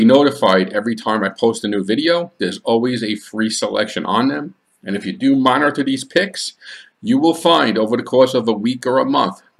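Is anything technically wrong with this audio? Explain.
No, there are no technical faults to report in this audio.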